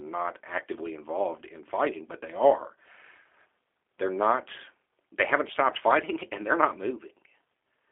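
G.729 codec coloration runs through the whole of this speech clip, and the damage is plainly audible. Everything above about 3.4 kHz and below 300 Hz is missing, giving a narrow telephone-line sound. The speech is rebuilt from a vocal-tract filter, a pitch predictor and a few sparse pulses per short frame rather than the real waveform, so it comes across rough and slightly synthetic, which fits the 8 kbit/s G.729A variant.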